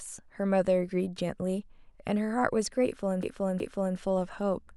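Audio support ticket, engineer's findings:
Stutter at 3.23–3.97 s: the same 0.37 s of speech plays twice more. Repeated frames, likely in the encoder or transport, adding 0.74 s.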